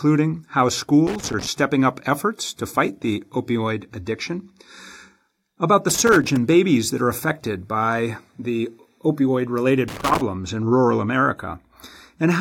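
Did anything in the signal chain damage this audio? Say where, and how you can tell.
Yes: three irregular bursts of scratchy crackle, at 1.07 to 1.47 s before "up efforts to fight", 5.89 to 6.37 s after "about the", and 9.88 to 10.21 s after "affected by the opioid". This is loose connector crackle in the analogue wiring, where a worn contact intermittently breaks the signal.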